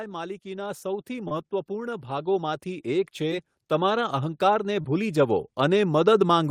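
Automatic gain rising runs through this speech clip from 0.05 s to the end. The automatic gain control judged the incoming signal too quiet and kept raising its gain step by step, so the whole recording grows steadily louder over the full span instead of settling at a fixed level. Because the gain acts on everything it receives, the speech and the background noise swell together.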